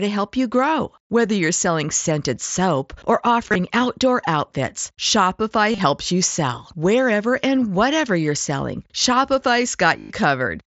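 Concealed Bluetooth headset packet loss occurs at 3.49–3.55 s after "selling scented soap or", at 5.72–5.80 s before "you sell", and at 9.99–10.10 s. Lost packets are patched with a repeated recent stretch of waveform. The first two events are short and scattered, while the last is a 105 ms run that comes through as a held buzzy tone with a slight warble on recovery.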